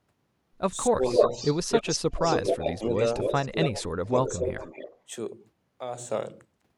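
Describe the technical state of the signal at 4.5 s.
At 4.5 s the speech dips by about 10 dB between 4.06 and 4.63 s, likely speech suppressed in double talk, the echo canceller ducking its own talker along with the loudspeaker echo. An echo leak also runs from 4.15 to 4.99 s: a copy of the speech trails by 277 ms, about 10 dB down, likely residue from loudspeaker playback that cancellation missed.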